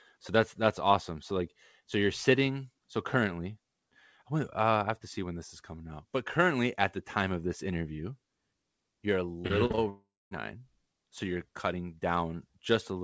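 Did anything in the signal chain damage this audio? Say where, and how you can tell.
Yes, at the network stage. From 9.42 to 9.79 s there is repeated packet loss (robotic sound): five short gaps, the longest 40 ms, each patched by stretching the previous sound. About 30% of that stretch is concealment, so the speech turns choppy.

Just after, from 9.89 to 10.33 s, the sound first smears into a fading buzz or hiss. It then drops to about 230 ms of silence before resuming, with that stretch of speech gone. That pattern points to a likely long network dropout, where the receiver ran out of packets entirely.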